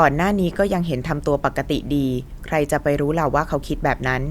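No technical faults are audible anywhere in this speech recording.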